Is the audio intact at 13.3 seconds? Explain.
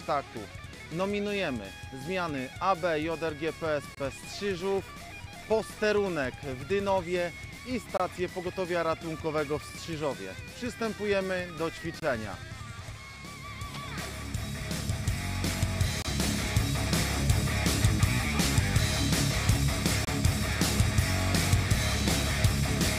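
Yes, at 13.3 seconds the audio plays through cleanly, with no dropout, click, distortion or other fault audible at that moment.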